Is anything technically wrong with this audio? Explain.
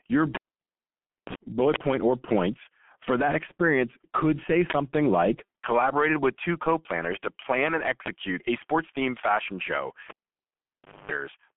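Yes. The whole speech clip has passed through the G.723.1 codec at 6.3 kbit/s, heavily damaged: coarse 30 ms frames and a slow-moving voice model leave it muffled, hoarse and smeared, with the line band limited to about 150 Hz to 3.4 kHz. It differs from ordinary band-limiting by the grainy, rough texture rather than mere dullness.

At 0.35 s and again at 10.10 s, a cable pulled and plugged in. Each time a pop is followed by about a second of near silence, then mains buzz as the plug tip makes partial contact, and a second pop as the sound returns at 1.35 s, just before "bullet point or points", and at 11.11 s. The first buzz is brief, about 53 ms at 60 Hz; the second lasts about 250 ms at 50 Hz. The hum and the paired pops tell it apart from a simple dropout.

At 4.70 to 4.74 s and at 8.06 to 8.08 s, an uninitialised buffer. A block of 40 ms and then one of 20 ms was played before any audio had been written into it, so leftover memory came out as a sudden loud crack or burst of digital noise. 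The second falls between "planners to plan and" and "a sports themed fashion". Unlike a cable pop, it is harsh noise with no hum.

At 5.45 to 5.48 s, VoIP packet loss concealed by the speech codec. One 30 ms frame was lost, and the decoder extended its last pitch and filter settings with falling gain, giving a short buzzy or noisy, fading stretch that recovers into "collaborated with two co". Unlike the buffer bursts, it is quieter, not louder.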